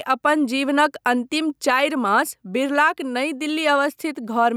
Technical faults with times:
0.00-4.57 gain pumping

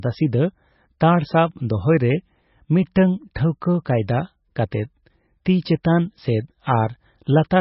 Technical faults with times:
0.00-7.61 MP3 compression
5.83 pre-echo

